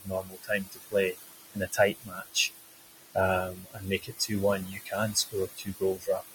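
From the first frame to the end, noise suppressor artifacts shape the sound. The suppressor pulls the room noise, which sits only about 9 dB under the speech, down by about 17 dB in the gaps, then lets it back up under each phrase. A spectrogram shows the noise floor pumping with the speech and breaking into isolated, twinkling time-frequency specks.

Five times, the suppressor also mistakes speech for noise: 0.0–0.94 s, 1.54–2.5 s, 3.52–4.31 s, 4.69–4.93 s and 5.14–6.34 s. In each stretch, quiet consonants and word endings are turned down with the background, by up to about 21 dB at 0.0–0.94 s and 5.14–6.34 s, about 20 dB at 1.54–2.5 s, about 17 dB at 3.52–4.31 s and about 13 dB at 4.69–4.93 s. Each stretch loses roughly half a second or less of sound, so syllable edges seem swallowed. The waveform shows speech tails collapsing abruptly, and the spectrogram shows high-frequency consonant energy missing.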